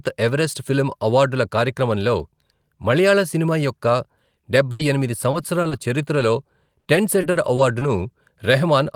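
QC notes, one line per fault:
4.71–7.83 s, repeated packet loss (robotic sound): across this stretch of speech the stream drops out nine separate times, each gap no longer than 80 ms, about 300 ms missing in total, roughly a tenth of the span. Each hole is papered over by stretching the preceding sound, so the result is choppy rather than silent. A single lost packet would leave one brief glitch; here the concealment recurs before the ear settles, which leaves the speech choppy with pieces missing.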